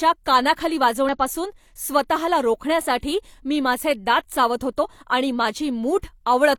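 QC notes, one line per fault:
1.09 s and 4.80–4.85 s, damaged data in a compressed stream: the decoder misreads corrupted frames in this speech, loses sync and hunts for the next valid header. It produces a brief chirp, squawk, click or short hole.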